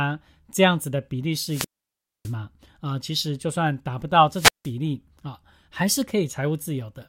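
At 1.46 to 2.34 s, and again at 4.31 to 4.72 s, the speech suffers a wireless microphone squelch dropout: the FM radio link fades, hiss rises, then the receiver mutes for 0.61 s and 0.17 s, a broadband noise smear followed by a flat, empty gap.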